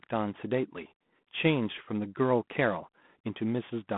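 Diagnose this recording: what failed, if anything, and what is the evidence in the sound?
Codec stage: G.726 ADPCM at 24 kbit/s, only three bits per sample of prediction error, leaves a rasp that swells with speech level throughout, unlike steady line hiss, within a 150 Hz to 3.5 kHz band.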